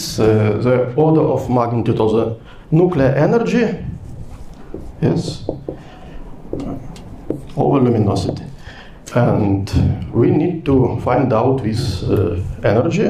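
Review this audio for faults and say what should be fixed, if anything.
Nothing in the recording needs fixing. No technical faults turn up anywhere in the audio.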